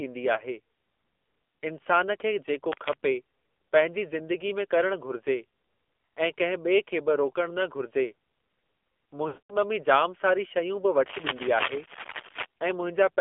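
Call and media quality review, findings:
AMR narrowband mobile codec, throughout. Speech coded through a narrowband mobile path; band limited to roughly 250 Hz to 3.5 kHz, nothing above 4 kHz. Plainly buzzy, synthetic timbre from the coarse pulse-driven vocal tract model, consistent with a low mode near 7.4 kbps.

Lost AMR speech frames, 0.34 s and 9.28 to 9.56 s. Frames failing checksum; decoder repeats last pitch and tract settings at falling gain. First a 20 ms dip, one frame. Second about 0.28 s, eleven frames, 220 ms lost: sound smears, fades to silence, returns rough.

Cable scratch noise, 2.72 to 2.96 s and 11.06 to 12.46 s. Dense, irregular bursts of scratching over the speech, likely a worn cable or connector shifting and changing contact resistance. First burst a few dB under the speech; second, about 1.4 s long, roughly as loud as the speech.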